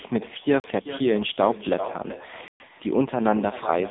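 Every sentence has a ghost. An echo with no canceller runs through the whole clip. The far end's loudspeaker feeds its own microphone, and nothing subtracts it. So the speech returns around 400 ms later, about 14 dB down. The copy is thinner than the original. It trails each phrase like a faint second talker. Nothing on the line removes it.

The whole call also passes through the AMR narrowband mobile codec, AMR-NB. The line band runs from about 200 Hz to 3.7 kHz. Nothing is left above 3.8 kHz. Codec damage is heavy. The speech sounds buzzy and synthetic, with a hollow, muffled top. That fits a low-rate mode near 6.7 kbps, where few pulses are left to rebuild the voice.

Two blocks of digital silence break the stream. The first runs from 0.60 to 0.64 s and lasts 40 ms. The second runs from 2.48 to 2.60 s and lasts 120 ms. In each, the sound cuts out with no fade. The short one reads as a brief hole. 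The longer one is a clear hole in the speech.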